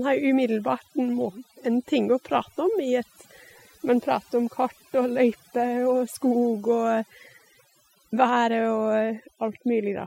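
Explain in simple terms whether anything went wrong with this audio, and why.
Something did go wrong. This speech clip has overdone noise removal from start to finish. A noise reduction tool was pushed too hard. It treats anything quiet as hiss and shuts it off, band by band. The gaps between words fall almost silent, with tiny twinkling specks left behind. The softer parts of the voice get cut along with the noise.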